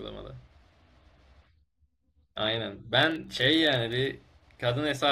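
From 3.03 to 4.12 s, a filter restarted on every block clicks at about 23.4 Hz, fitting 2048-sample blocks that each start from silence, giving a level-following buzz.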